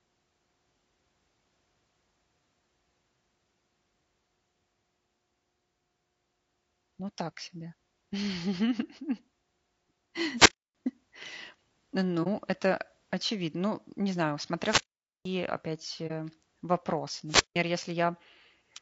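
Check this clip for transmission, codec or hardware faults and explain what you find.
Three kinds of fault are present: a codec coloration across the whole clip, plus three radio-style dropouts and two short muted gaps.

Low-delay AAC compression runs throughout. The speech sounds rough and grainy, which points to AAC-ELD at a low bitrate near 32 kbps as the likely cause. On a spectrogram, harmonics look smeared, with noise filling the gaps between them and a thin, synthetic-looking top band.

Wireless microphone squelch dropouts occur at 10.35–10.75 s, 14.59–15.33 s just after "не знаю", and 17.27–17.59 s. In each, the FM signal fades, hiss swells, and then the receiver mutes for about 290, 470 and 170 ms. The waveform shows flat holes preceded by a rise of noise.

AAC frame loss with muting occurs at 12.23–12.27 s and 16.07–16.12 s. Each gap lasts about 30 ms, fitting one zeroed frame. 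The overlapping windows produce soft fades, so the waveform shows a brief tapered dip rather than a hard cut.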